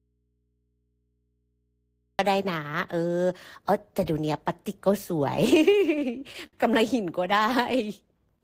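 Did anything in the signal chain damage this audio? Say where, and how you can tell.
Yes, two stages left marks. The clip opens in an audio dropout to a faint residue that is already under way and lasts until 2.19 s. Until then the speech is absent and only mains hum remains, about 50 dB below the normal signal level, before the speech cuts in abruptly rather than fading up. A hum floor with the signal gone likely points to an open or disconnected analogue input, with the downstream path still live and amplifying the hum.

Between 5.59 and 6.56 s the speech shows repeated stalls (stutter), a network and jitter-buffer fault. Seven short hitches hold the last sound in place, the longest about 66 ms and roughly 148 ms in total, so about 15% of that stretch is concealment. Nothing is actually lost. Late packets drained the receive buffer each time, and the receiver stretched what it had until the next data arrived, which makes the delivery drag and stutter.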